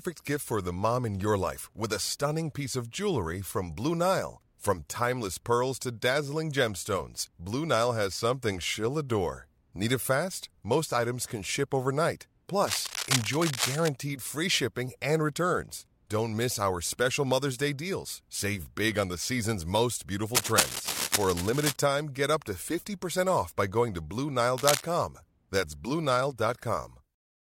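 Cable scratch noise breaks in three times: 12.67 to 13.88 s, between "items can ship overnight" and "free shipping and returns", a bit under the speech level; then 20.34 to 21.76 s, after "on the season's most"; and briefly at 24.56 s. The last two run roughly as loud as the speech. Each is a rough, crackly rustle, likely from a worn cable or connector being moved.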